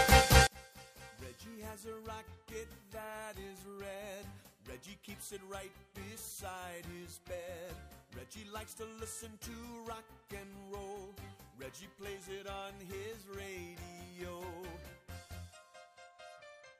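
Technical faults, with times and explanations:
0.47 to 16.80 s, one channel inverted: from 0.47 s the summed sound drops by about 30 dB and turns faint, with its centre almost gone. The likely cause is one stereo channel with reversed polarity, so shared material cancels in mono.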